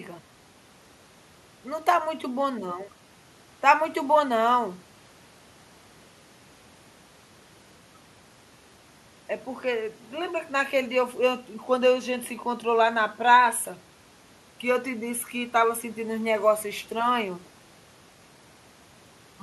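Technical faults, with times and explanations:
Nothing technical stands out in this speech recording; there's no fault to point to anywhere along it.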